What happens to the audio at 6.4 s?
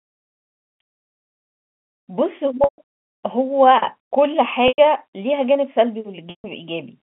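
From 6.30 to 6.44 s, packet loss with pitch repetition: the last pitch period repeats as a buzzy hold, fades to silence, and cross-fades back, unlike an abrupt dropout.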